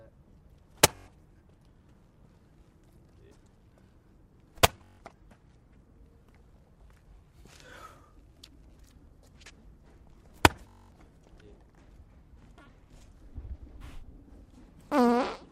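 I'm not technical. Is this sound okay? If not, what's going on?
No. There are three bursts of Bluetooth stutter, at 0.96 to 1.08 s, 4.78 to 5.00 s and 10.69 to 10.95 s. Each time, chunks of audio traveling over the wireless link arrived late or were lost. The receiver kept replaying its last short slice until fresh data came in, which makes a rapid, repeating stutter. The missing stretches grow from about 0.11 s to 0.17 s to 0.23 s. After each one, the sound resumes further along, as though it had kept playing during the gap.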